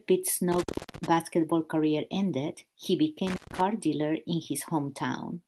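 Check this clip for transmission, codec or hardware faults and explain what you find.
Two dropouts from an intermittent contact, a loose plug or cable briefly opening the line. The first runs from 0.52 to 1.07 s, just before "career ended he", with the signal gone for about 319 ms. The second, from 3.27 to 3.60 s, sits between "career ended he" and "dealer in" and is open for about 147 ms. Each time the speech cuts out with a crackle as the contact breaks and remakes, leaving faint hiss in the gap. Underneath, the call codec path runs as expected, with a top end that fits Opus limited to around 12 kHz.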